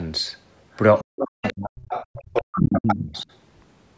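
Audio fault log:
0.73–0.77, 0.97–1.04, 1.44–1.53 and 1.82–3.22 s: other side's voice leaking through. A second voice appears in brief scraps, then a long stretch. It grows from about 35 dB below the speech to about 5 dB below, likely loudspeaker echo the echo canceller failed to remove.
1.03–1.9 and 2.2–3.29 s: speech suppressed in double talk. The talker's voice dips and breaks up, by up to about 40 dB and then about 35 dB, for roughly 0.7 s and 1 s in all. This is likely because the canceller could not separate it from the overlapping far-end voice.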